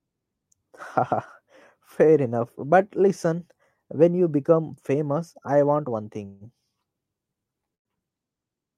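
At 6.25 s, just after "famous I want one", and again at 7.75 s, the speech stalls in a call audio freeze, likely from delayed packets draining the jitter buffer. The last sound is stretched as a fading buzz for about 152 ms. At 7.75 s the stretched sound lasts about 104 ms and includes about 100 ms of silence. The speech then resumes where it stopped, with nothing lost but now running later. On a spectrogram each freeze shows as smeared, repeating bands that fade out. On the waveform the second shows as a flat gap.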